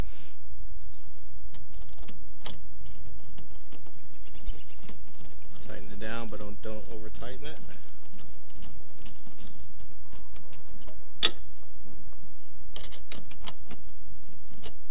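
Nothing here stands out as a technical problem; the sound runs along steadily from beginning to end with no glitches, gaps or drops to point to.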